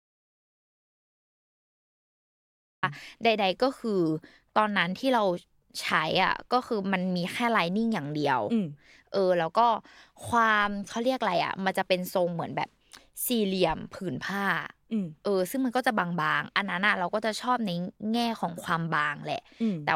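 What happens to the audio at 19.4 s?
Nothing goes wrong at 19.4 s; the audio plays through that moment intact, with no dropout, click or distortion.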